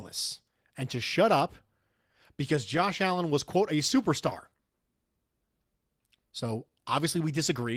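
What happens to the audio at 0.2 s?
Clock drift between sender and receiver, present throughout: the sender's clock runs about 3% slow, so the draining jitter buffer repeats short pieces, causing small, uneven timing hiccups in the speech.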